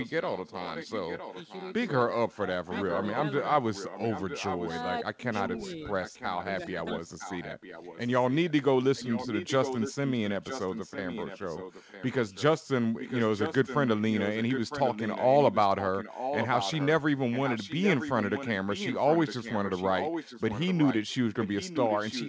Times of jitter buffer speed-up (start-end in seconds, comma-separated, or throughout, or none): none